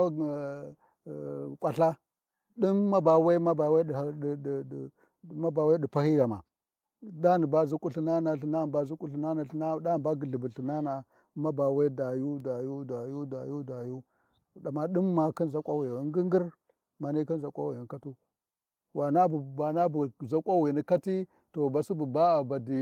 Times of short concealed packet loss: none

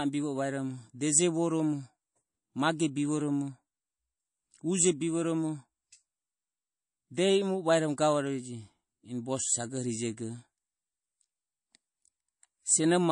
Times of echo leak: none

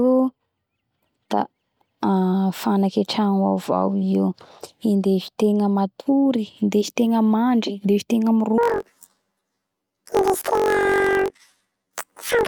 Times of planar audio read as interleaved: 8.58-12.47

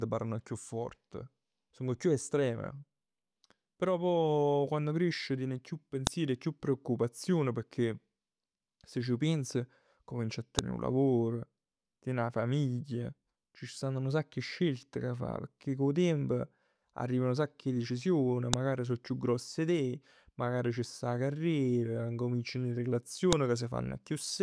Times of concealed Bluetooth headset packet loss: none

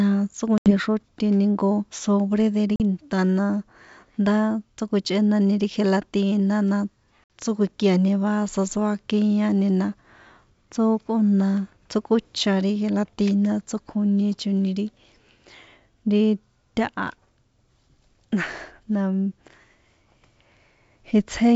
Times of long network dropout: none

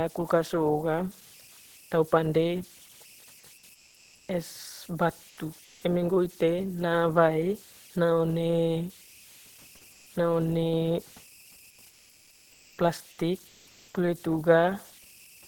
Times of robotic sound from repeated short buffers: none

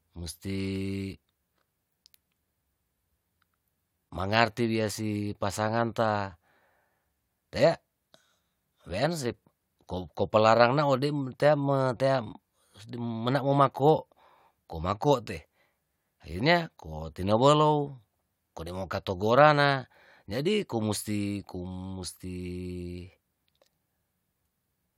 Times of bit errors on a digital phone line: none

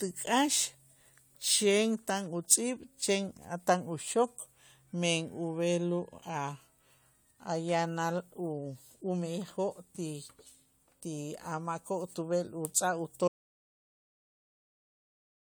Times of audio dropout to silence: 13.28-15.48

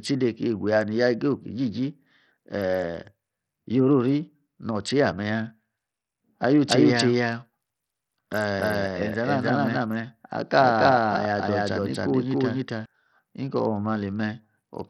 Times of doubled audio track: 6.68-12.86

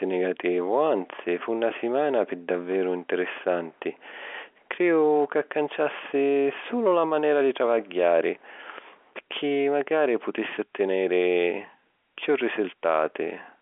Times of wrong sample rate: none

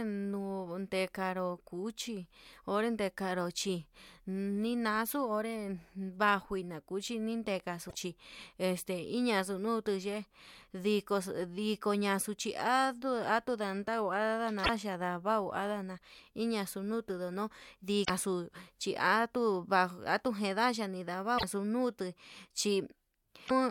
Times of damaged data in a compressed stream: 7.86-7.95, 14.61-14.69, 18.01-18.10, 21.35-21.44, 23.46-23.51

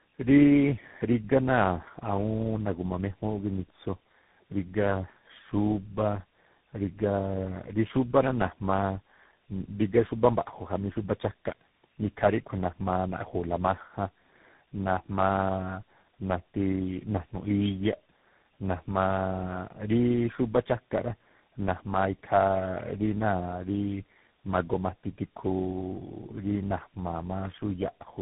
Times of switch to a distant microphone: none

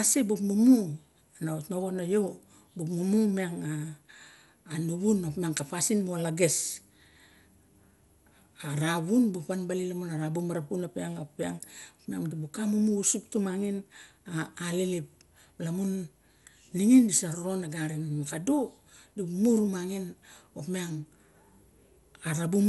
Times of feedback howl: none

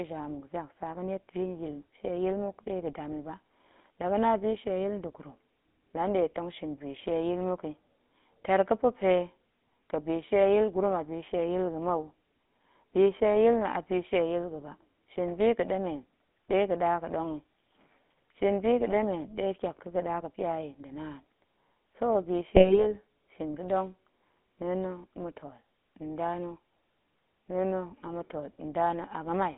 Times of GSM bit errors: 18.86-18.93, 22.55-22.84

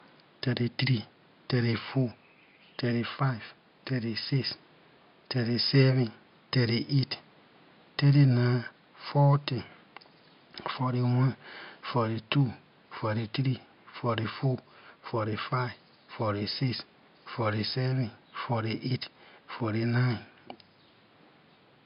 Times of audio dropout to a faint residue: none

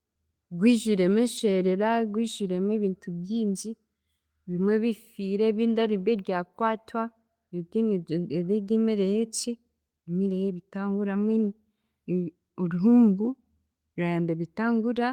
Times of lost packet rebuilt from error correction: 1.37-1.39

